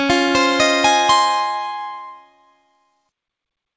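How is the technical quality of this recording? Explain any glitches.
The signal shows no glitches or dropouts; it carries the ordinary character of a call path, with the microphone processing trimming the lowest bass and the G.722 wideband codec at 64 kbps leaving nothing above about 8 kHz, both expected behaviour for this kind of link.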